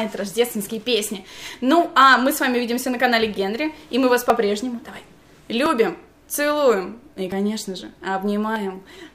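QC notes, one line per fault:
4.30 s, 5.66 s, 7.32 s, 8.56 s, dropped buffer (overrun): the capture side likely failed to read its buffers before they were overwritten, so short stretches are lost and the edges butt together. The sound jumps ahead, roughly 20 ms at the first two points and about 40 ms at the last two.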